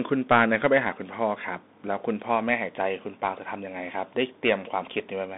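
A speech clip that sounds thin and boxed-in from start to finish, with scratchy, gritty sibilants, loud bright moments that smear and distort, and a fine granular hiss riding under everything. Nothing is heard above about 3.8 kHz, and the usable band sits roughly between 200 Hz and 3.7 kHz. This is the Bluetooth CVSD headset codec, which fits a 64 kbps link sending one up-or-down bit per sample with an adapting step size. Fast, loud high-frequency movement outruns that step, producing the distortion.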